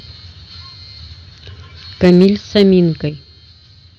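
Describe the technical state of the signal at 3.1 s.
At 3.1 s the speech and its background drop together by about 6 dB in a single abrupt step, the signature of a microphone volume stepped down, likely by call software lowering the input gain. Unlike a compressor's gradual gain riding, the level then holds steady.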